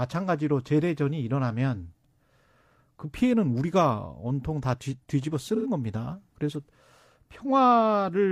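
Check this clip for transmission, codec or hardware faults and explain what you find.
One fault stands out: a brief AAC frame loss with concealment in this speech clip, from 5.55 to 5.66 s. The gap, roughly 85 ms, fits two lost frames. Instead of going silent, the decoder rebuilt the missing stretch from the last good spectrum with randomised phase, so the sound turns smeared and noisy, a phasey blur rather than a dropout. On a spectrogram the harmonics stop moving and freeze into a flat, smeared block. The waveform keeps roughly the same envelope but loses its periodic shape.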